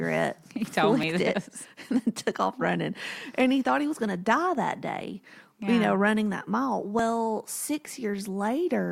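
At 1.03 s and 6.99 s, after "know running that mile", overlap between stream segments trimmed milliseconds of real speech, leaving a tiny skip.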